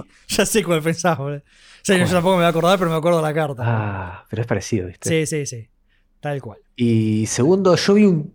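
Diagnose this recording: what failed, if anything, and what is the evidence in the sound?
From 2.05 to 2.97 s, speech turns harsh and buzzy with noise-filled pauses and broadband spectrogram smear, likely from a stuck converter bit offsetting samples.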